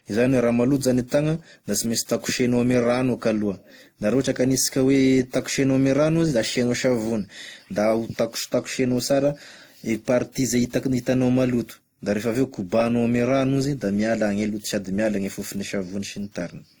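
Speech runs for the whole clip with two layers of coding artefacts heard together, the likely result of transcoding between lossy codecs, consistent with a WMA stage near 64 kbit/s followed by Opus near 24 kbit/s. A single codec leaves one consistent artefact character; here one set of artefacts sits on top of another. The top of the band reaches about 20.2 kHz.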